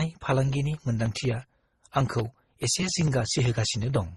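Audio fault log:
throughout, transcoding between lossy codecs: the sound carries layered, mismatched smearing and swirly artefacts, and nothing is heard above 12 kHz. This is likely a low-bitrate chain, MP3 then AAC then Opus, each re-encoding the last one's damage. The spectrogram shows a hard ceiling at 12 kHz with blotchy, patchy texture below it.
0.998 to 4.09 s, periodic USB or driver dropouts: about fifty tiny gaps of roughly a millisecond, evenly spaced every 63 ms, where audio is skipped rather than silenced, so the waveform jumps abruptly and a regular ticking rides on the signal. A spectrogram shows a comb of thin vertical broadband lines.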